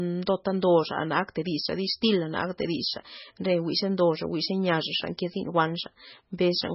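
From start to finish the speech sounds watery and swirly, with heavy damage and nothing above 5.6 kHz. The likely cause is MP3 compression at a rate that fits about 16 kbps, zeroing weak frequency lines frame by frame. Unlike a plain low-pass filter, the muffling also warbles.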